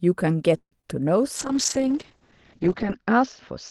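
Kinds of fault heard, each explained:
call audio freeze: From 0.57 to 0.72 s the sound stalls into a fading fill and about 80 ms of silence, likely from late packets draining the jitter buffer.
short concealed packet loss: Around 0.81 s, roughly 10 ms never arrived. The receiver patched it by extending the previous sound, leaving a brief smear.
call bitrate drop: From 1.37 s the encoder falls from 32 to 8 kbps. Bandwidth shrinks from 20 kHz to 8 kHz, so the speech turns muffled and rough.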